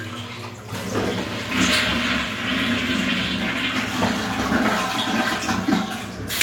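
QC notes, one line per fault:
No audible faults in this recording of sounds.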